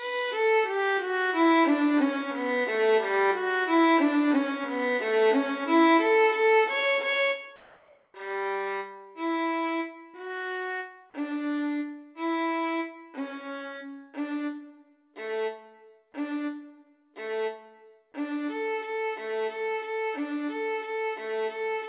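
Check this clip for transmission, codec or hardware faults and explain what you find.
There's one transmission fault here, and it's brief. From 7.56 to 8.14 s, about 580 ms, you get comfort noise in place of the background. The real background, which sits roughly 36 dB below the loud parts, drops out and a smooth, featureless hiss takes its place at the same level before the sound resumes. The likely cause is discontinuous transmission: the sender's voice detector judged the gap silent and stopped sending, so the receiver synthesized shaped noise to fill it. Throughout the clip, the call path's narrowband coding leaves nothing above 4 kHz.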